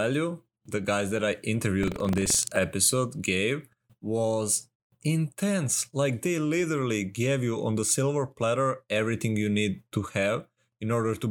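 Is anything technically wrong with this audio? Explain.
Yes. From 1.79 to 2.60 s, just before "gave was intense", there is buffer tearing. The program filling the playback ring buffer has drifted against the hardware reading it, so the two cross within each period, and a small slice of every buffer carries speech from roughly a tenth of a second earlier, with abrupt splices on either side. Those splices repeat at 23.4 Hz, which fits a 2048-sample buffer, giving a steady robotic rattle over the speech.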